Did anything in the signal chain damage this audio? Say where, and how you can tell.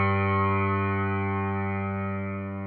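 Yes. Wrong sample rate at playback affects the whole clip: everything runs 1.5 times too fast and sits about 7 semitones high, which fits 16 kHz material played at 24 kHz without conversion. A spectrogram shows every component shifted upward by 1.5, and the waveform appears compressed in time.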